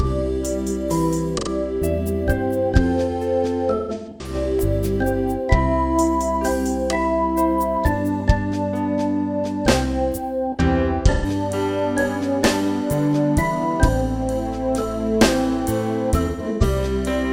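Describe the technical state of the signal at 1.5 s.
Around 1.5 s the signal is recovering from AAC frame loss with concealment spanning 1.37 to 1.48 s, roughly 85 ms, which fits two missing frames. The decoder rebuilt that gap from the previous spectrum, giving a brief smeared, noisy patch. A spectrogram shows a blurred, texture-less smear.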